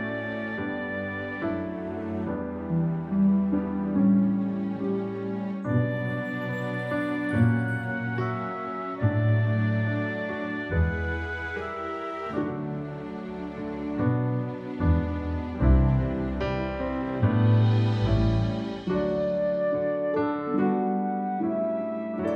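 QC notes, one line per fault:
No faults heard anywhere in this clip.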